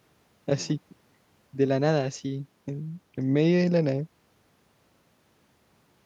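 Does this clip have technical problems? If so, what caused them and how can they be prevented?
No, no technical problems can be heard in this speech clip. There is some background room noise, about 44 dB below the speech, which belongs to the recording space rather than the system.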